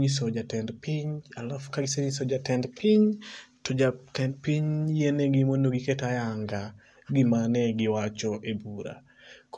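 No technical faults are audible anywhere in the recording.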